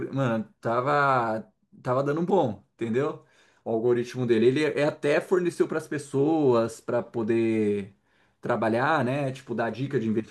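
No technical faults are audible.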